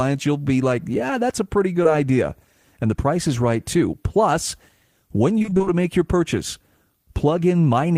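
Around 1.83 to 1.87 s, right after "that's a pretty", there's a short concealed packet loss: a sliver of the call arrived too late, so the decoder stretched the preceding sound to cover it and blended back in. You hear it as a tiny smear.

Later, from 5.39 to 5.83 s, just before "your purchase", you get repeated packet loss, and it turns robotic. Short holes, the longest about 23 ms, keep landing back to back, and roughly half that stretch is patched-over guesswork, so it sounds choppy, with pieces missing.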